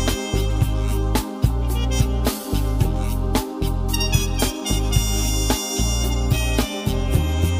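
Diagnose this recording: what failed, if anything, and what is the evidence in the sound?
Nothing in the signal chain appears to have failed: the audio shows no dropouts, discontinuities or spectral damage anywhere that would point to a problem at any stage.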